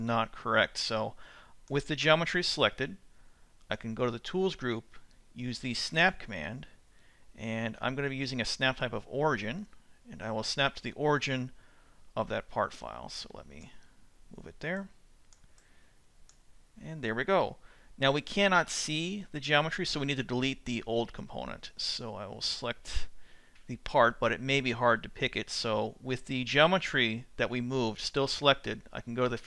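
No technical faults can be heard anywhere in this clip.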